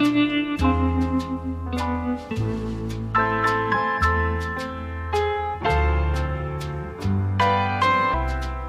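Right near the end, at about 8.13 s, there's a quick blip from damaged data in the compressed stream. Part of the data in there is wrong, so the decoder misreads that frame, loses sync and hunts for the next header, leaving a short glitch just under 20 ms long.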